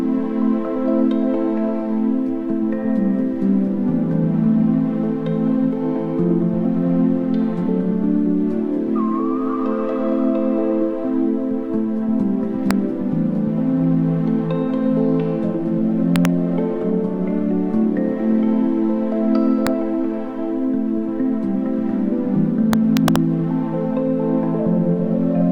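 Integer overflow cracks at 12.71 s, 16.16 to 16.25 s, 19.67 s and 22.73 to 23.16 s: peaks at or up to about 1 dB past full scale wrapped to the opposite sign instead of limiting, giving violent snaps.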